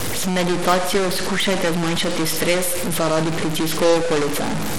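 Throughout the speech, a distortion sits on every sound, and the pauses fill with hiss instead of going quiet. That points to a stuck bit, likely a converter line held at one value. Over the same span, Bluetooth SBC compression is likely: a gritty, coarse texture and flickering treble, with nothing above 17 kHz, consistent with a low bitrate near 96 kbps.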